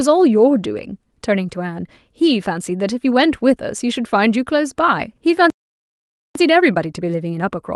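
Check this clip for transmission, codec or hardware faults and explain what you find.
Two faults show up in this speech, both in the last couple of seconds, heard through a call-codec path whose top end stops near 12 kHz.

From 5.50 to 6.35 s there is a playback stall: the speech cuts off mid-flow for about 0.85 s of dead silence, most likely because the player's buffer ran dry or its thread was held up. A waveform shows a flat gap; a spectrogram shows a fully blank vertical band.

From 6.35 s to the end comes time-compressed catch-up: the player sheds its backlog by splicing out short slices and cross-fading the joins, running about 1.1 times fast at unchanged pitch. It sounds slightly rushed. Spectrogram harmonics stay at the same height but syllables look squeezed, with faint seams.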